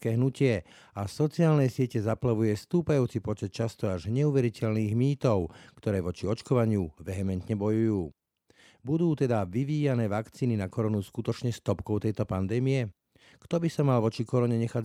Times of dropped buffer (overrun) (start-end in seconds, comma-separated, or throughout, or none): 4.60, 10.74